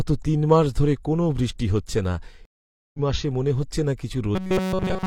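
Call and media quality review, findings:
Stream reconnect, 2.45 to 2.99 s, after "কোনও বৃষ্টি হচ্ছে না". Player/network layer. Connection dropped, about 0.49 s of silence, then a fresh decoder picks up roughly 0.3 s later. Resumes at "মাসে মনে হচ্ছে না".

Robotic sound from repeated short buffers, 4.35 s to end, after "মাসে মনে হচ্ছে না". Rigid metallic buzz at 188 Hz. Likely buffer underrun in playback. The last chunk of about 5.3 ms loops nearly the whole stretch, and real audio is skipped.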